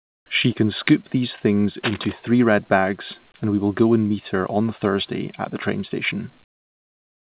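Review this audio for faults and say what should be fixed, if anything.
Comfort noise in place of the background covers the opening, from 0 to 0.26 s, and the ending, from 6.44 to 7.30 s. In both pauses between speech the real room background gives way to a smooth, featureless hiss, about 34 dB quieter at the start and about 24 dB quieter at the end. This is likely discontinuous transmission. The sender stopped sending during silence, and the receiver made up noise that roughly matches the background's shape. On a spectrogram these stretches look like a uniform, textureless wash with none of the fine grain of the real background, and the waveform drops to a flat, even floor. Prevention: turn off discontinuous transmission or voice-activity gating on the sending side, or lower its threshold, so the true background keeps flowing.

Cable scratch noise runs from 1.83 to 2.12 s, between "can scoop these things" and "three red bags and". 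Dense, uneven rustling sits about 10 dB below the speech. It is likely a worn cable, connector or control being moved, with contact resistance jumping rapidly. A spectrogram shows irregular broadband flecks scattered across the band for those 0.3 s, and the waveform carries jagged, spiky bursts riding on the speech. Prevention: replace or secure the faulty cable or connector and avoid handling it while recording.

The call path's A-law coding leaves nothing above 4 kHz, so the spectrogram is empty above that line throughout.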